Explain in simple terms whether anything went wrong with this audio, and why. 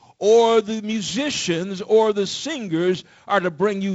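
Nothing went wrong here.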